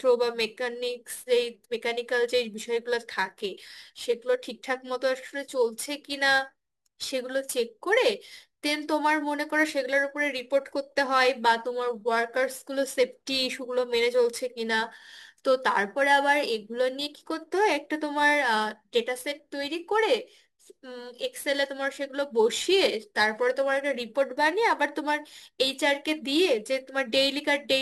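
Throughout, crude rate conversion repeated samples unfiltered, fitting 44.1 kHz to 48 kHz, leaving a gritty, inharmonic fizz about 25 dB below the speech.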